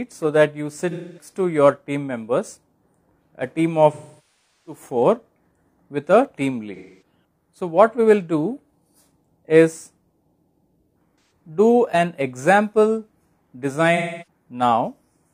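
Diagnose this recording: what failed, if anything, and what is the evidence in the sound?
Codec-level AAC frame loss with concealment. There are five dropouts, at 0.90–1.29, 3.92–4.81, 6.75–7.02, 11.21–11.31 and 13.96–14.27 s, heard as smeared, phasey patches. The decoder rebuilds the missing frames from the last good spectrum. The longest gap, about 0.73 s, stretches that guess furthest.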